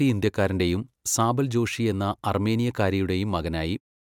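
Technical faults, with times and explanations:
No technical faults are present; the smooth fade-out around 3.8 to 4 s at the tail is an ordinary edit with no click or hard edge.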